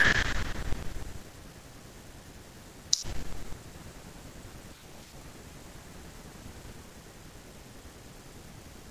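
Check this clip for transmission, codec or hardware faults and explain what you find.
No transmission, codec or hardware fault is audible anywhere in this speech recording, and the signal holds steady with nothing interrupting or distorting it.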